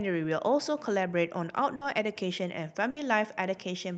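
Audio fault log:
1.75 to 1.84 s and 2.90 to 2.99 s, burst of packet loss: Each gap is about 60 ms long. Several packets in a row never arrived in time. The receiver filled about 60 ms by stretching the last bit of speech and fading it down, heard as a brief held buzz or dimming hiss. Then the speech jumps ahead. About 60 ms of the original is simply gone.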